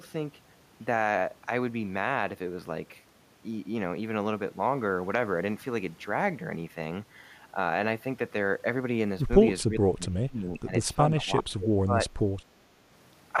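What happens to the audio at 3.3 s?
Nothing goes wrong at 3.3 s: the speech carries on without any dropout, click, distortion or other fault at that point.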